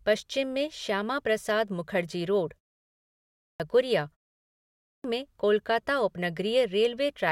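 At 2.95 s and again at 4.41 s, just before "में कोलकाता", there's a clipped start after a pause: the output dozes during short gaps (about 0.4 and 0.3 s), then swallows roughly 650 and 630 ms as speech abruptly resumes.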